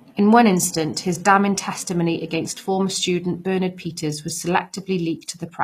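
From start to finish the treble sounds rebuilt rather than real, likely HE-AAC compression copying lower bands upward. The damage is plainly audible and points to a low bitrate around 24 kbps.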